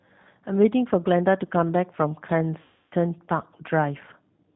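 The speech runs through the G.729 codec, with plainly audible codec damage: nothing above 4 kHz, and a rough, slightly synthetic texture from rebuilding the voice out of a vocal tract filter, pitch predictor and sparse pulses, which points to the 8 kbit/s G.729A variant. From 2.62 to 2.94 s there is VoIP packet loss concealed by the speech codec. About 300 ms of audio is missing, consistent with a run of roughly ten lost packets, and the decoder fills the gap by repeating its last pitch and filter at falling gain, so the sound smears into a fading buzzy tone or coloured noise. Because each frame builds on the one before, the level and clarity take a short while to recover after 2.94 s.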